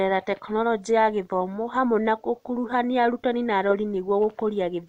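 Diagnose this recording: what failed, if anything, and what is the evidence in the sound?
Nothing failed: no stage in the chain, from capture through playback, leaves an audible mark anywhere in this speech recording.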